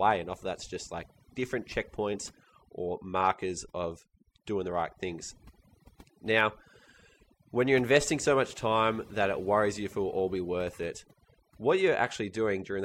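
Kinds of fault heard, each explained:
Overdone noise removal: the pauses between phrases drop to near silence flecked with twinkling specks across the whole clip. Noise reduction set far too strong switched off frequency bands near its noise estimate, taking quiet voice detail with them.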